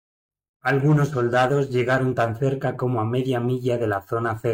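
Nothing in the signal points to a technical fault at any moment; the audio stays continuous throughout.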